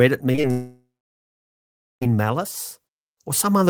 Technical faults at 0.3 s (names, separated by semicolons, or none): short concealed packet loss